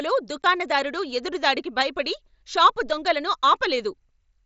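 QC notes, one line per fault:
0.42 s, unconcealed Bluetooth headset packet loss: a 15 ms silent hole with hard edges. Nothing filled the gap, which fits two dropped packets.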